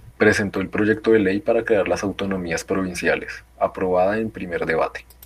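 No technical faults occur at any point in this speech recording.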